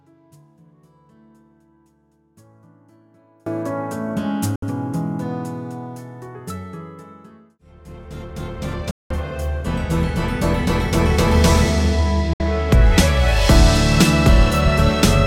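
The signal path likely lost its input while staying live, an audio dropout to a faint residue: from the start to 3.46 s only faint sound remains, about 35 dB below normal, before the full signal cuts back in. Next comes a digital broadcast dropout, where the receiver lost good frames and muted: the sound fades to silence within about 3 ms at 4.56 s, 8.91 s and 12.33 s. The holes last roughly 64 ms, 192 ms and 64 ms, which fits two, six and two lost frames.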